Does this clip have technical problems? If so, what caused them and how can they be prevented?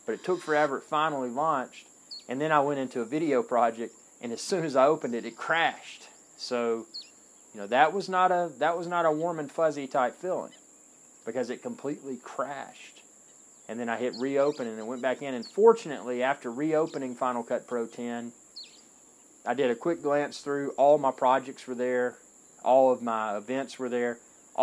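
No, this clip has no technical problems, so there are no causes to explain and nothing to prevent.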